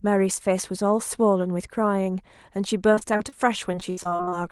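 From 2.94 to 3.33 s and again from 3.72 to 4.33 s, repeated packet loss (robotic sound) leaves five and then ten short holes, up to 71 ms, each patched by stretching the last sound. The speech turns choppy with pieces missing, unlike a single clean dropout.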